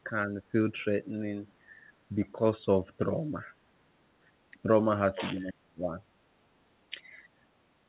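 Right from 0.04 to 0.54 s the speech sags a little, then again from 4.52 to 4.69 s, hard from 5.42 to 6.0 s where it nearly vanishes (something like 35 dB down), and faintly at 6.9 to 7.0 s. That's speech suppressed in double talk, likely the echo canceller mistaking the talker for far-end echo while both sides were talking. Then at 7.28 to 7.39 s the room sound briefly ducks by about 13 dB. That's background gated by the echo canceller, which clamped the mic while the loudspeaker played and let go a moment later. The whole thing sits under a 4 kHz ceiling, which fits a narrowband telephone codec.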